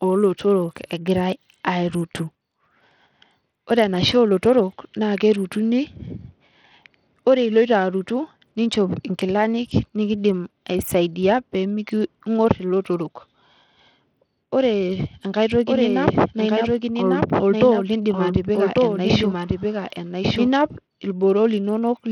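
From the start the treble of the speech is dull and unstable, flickering in and out, with a gritty, grainy noise and aliased tones riding on it. This is likely Bluetooth SBC compression at a starved bitrate, something around 80 kbps, where the upper sub-bands get almost no bits and the rest are coarsely quantised.

From 15.67 s to 20.47 s a second, full-range copy of the speech runs about a second behind the original and roughly 5 dB quieter, switching on and off abruptly with no reverb or decay. This doubled audio track likely comes from the same signal being captured again through a slower path and mixed back in.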